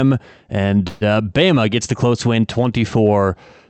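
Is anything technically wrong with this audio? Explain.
Yes. From 0.87 to 1.03 s there is a call audio freeze: packets were likely held up in transit, emptying the jitter buffer, so the receiver stretched the last sound into a fading buzz or hiss for about 140 ms. The speech then resumes where it stopped, nothing lost but running about 0.14 s later, still band-limited near 8 kHz by the call codec.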